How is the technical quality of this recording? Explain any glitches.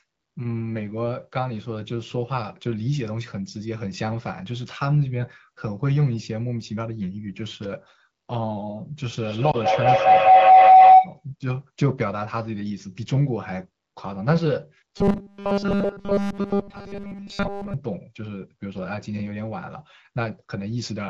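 The recording has three glitches on top of clean wideband phone audio.

From 9.13 to 11.25 s, feedback howl: a microphone-to-loudspeaker loop gains level each pass, building a tone near 700 Hz, about 13 dB above speech, pulsing roughly every fifth of a second.

Inside that howl, at 9.51 to 9.57 s, lost AMR speech frames: the decoder concealed one corrupted frame by reusing old settings, leaving a brief dip lasting about 20 ms.

From 14.98 to 17.74 s, robotic sound from repeated short buffers: likely audio arrived too seldom, so a tiny slice was looped, giving a metallic 200 Hz buzz that covers nearly everything.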